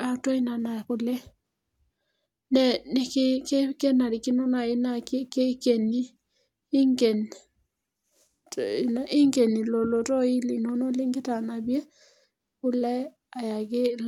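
No technical faults can be heard anywhere in the recording.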